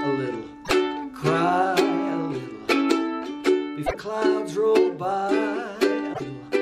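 Three brief glitches break through the audio, at 0.62 to 0.71 s, 3.83 to 3.95 s and 6.10 to 6.21 s, each lasting roughly a tenth of a second. They come from damaged data in a compressed stream: at those points the encoded bytes were corrupted, so the decoder misread the affected frames, lost sync and hunted for the next valid frame header before recovering.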